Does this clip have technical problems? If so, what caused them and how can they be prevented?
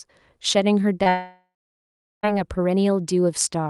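Yes. From 1.03 to 1.07 s there is a short concealed packet loss: about 20 ms of audio went missing and the decoder filled it by extending the preceding sound, heard as a brief smear. On a spectrogram the harmonics smear briefly, and the waveform repeats itself for one cycle-like stretch. Prevention: raise the jitter buffer margin or enable forward error correction so single lost packets can be rebuilt.

From 1.09 to 2.25 s a long network dropout follows. The last sound is stretched into a fading buzz or hiss and then leaves about 0.74 s of silence, with the lost audio never returning. The spectrogram shows a decaying smear, then a blank band, and the waveform flattens. The likely cause is a network outage on the link. Prevention: use a more stable connection or prioritise call traffic so packets keep flowing.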